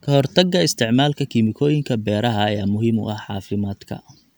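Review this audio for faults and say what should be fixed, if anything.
Nothing here needs fixing, since I couldn't hear any fault anywhere in the speech.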